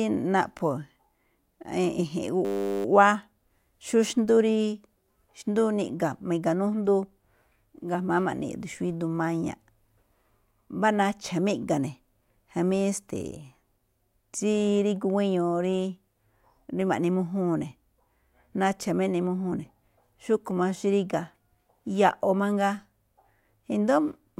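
At 2.45 s the system stalls and the sound hardware keeps replaying the same 10 ms ring buffer, a system hang loop lasting until 2.85 s. The repeated 10 ms slice becomes a steady 100 Hz buzz replacing the speech, with essentially nothing lost afterwards.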